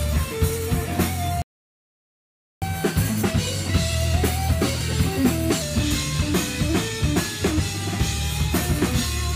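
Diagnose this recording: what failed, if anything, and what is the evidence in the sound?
The failure is at the playback stage: a playback stall. At 1.42 s the sound cuts out in mid-flow and the output stays silent until 2.62 s, a gap of about 1.2 s. That behaviour points to a player whose buffer ran dry or whose audio thread was likely blocked, so no samples reached the output until it recovered.

The recovery follows as catch-up at higher speed. From 2.62 s to 5.62 s the audio plays back at 1.1 times normal speed, and its pitch rises by roughly one and a half semitones. The player is resampling its backlog to recover the time lost in the stall. Once that three-second stretch ends, speed and pitch drop back to their normal values.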